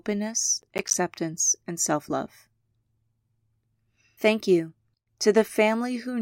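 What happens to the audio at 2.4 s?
Nothing goes wrong at 2.4 s; the speech there plays through intact, with no dropout, click, glitch or other audible fault.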